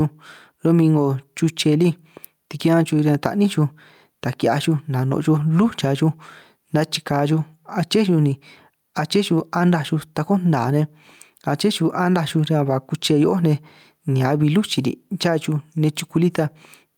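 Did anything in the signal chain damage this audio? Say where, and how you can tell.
Yes. Gain pumping runs through the whole speech clip. Loud and soft parts sit closer in level, and the sound is squashed. The swing is roughly 5 dB. The likely cause is input gain set far too high, with a fast limiter in the capture processing pulling it down.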